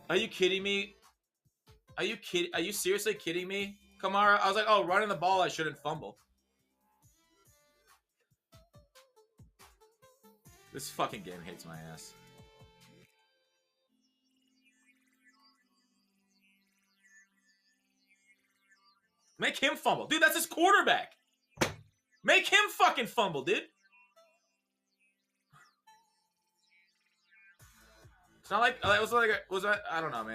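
The noise suppressor mistook wanted sound for noise and turned it down at 0.94–1.12, 3.8–3.99, 6.13–7.97, 12.73–13.21 and 28.24–28.45 s. The level sinks by about 7 to 12 dB, and by about 21 dB in the long dip near 6–8 s.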